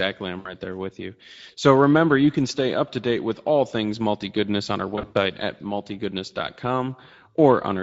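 Speech runs through the Speex codec for the whole clip. The voice is hoarse and noisy, and the top band sounds like shaped hiss. That points to a mid-rate setting near 17 kbps. The damage is this thin excitation, not the swirling or warbling that transform codecs produce. VoIP packet loss concealed by the speech codec appears at 0.39–0.54 s, just before "there with you", and again at 4.95–5.18 s, just after "multi goodness on our". In the second event about 140 ms goes missing across 200 ms, with the longest gap near 100 ms. Instead of silent dropouts, each gap is filled with a stretched, buzzy tone or coloured noise that fades out, and the voice stays weak for a moment after it returns.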